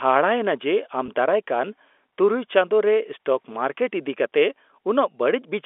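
At 1.06 to 1.08 s, just after "ᱮᱱᱟ ᱡᱮ", there is packet loss with pitch repetition. About 20 ms of speech went missing, which fits a single lost packet. The receiver filled the gap by repeating the last pitch period. It sounds like a brief, slightly held buzz on the telephone-band G.711 line.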